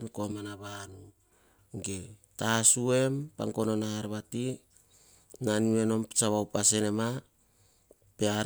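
From 0.32 to 1.32 s the speech turns hollow and phasey. This is channel delay causing comb filtering. One channel lags the other by about 3 ms, so summing to mono cuts notches beginning near 150 Hz and repeating evenly upward. Unlike flanging, these notches stay fixed instead of sweeping.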